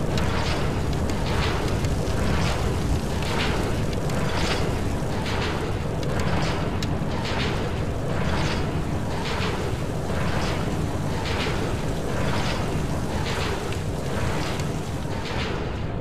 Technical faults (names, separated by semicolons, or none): none